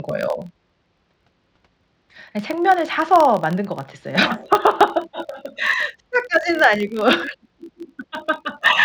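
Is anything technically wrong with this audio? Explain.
Yes, there's one problem. Throughout the speech, a filter restarted on every block resets its state each time, so every block starts with a tiny transient. You hear a 43.1 Hz buzz that tracks the level, which fits 1024-sample blocks.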